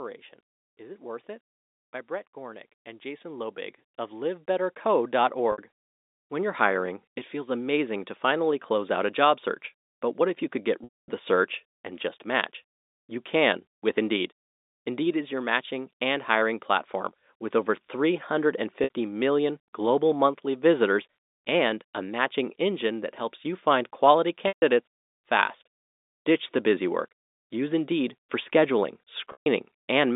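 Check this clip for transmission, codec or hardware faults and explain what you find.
Two faults are audible in this speech clip: an automatic gain rise early on and a series of packet losses concealed by pitch repetition. The telephone-band sound of the G.711 line, with nothing above about 3.7 kHz, is heard throughout.

Automatic gain rising, from 0.77 to 8.17 s: the speech and the background noise behind it swell together, slowly and steadily, by about 17 dB over roughly seven seconds. The automatic gain control judged the incoming level too low and kept raising its gain until it reached its target.

Packet loss with pitch repetition, at 5.52 s (60 ms), 10.84 s (240 ms), 18.84 s (60 ms), 24.48 s (140 ms) and 29.32 s (140 ms): the two 60 ms gaps sound like a briefly held, buzzy tone. The longer ones sag into silence before the speech fades back in, at 10.84 s between "if you could get" and "the search and just", and at 24.48 s and 29.32 s right after "helps you find quality" and "for scheduling". 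Audio packets went missing, and the receiver filled each gap by repeating the last pitch cycle and fading it out. The gap lengths fit 20 ms packets.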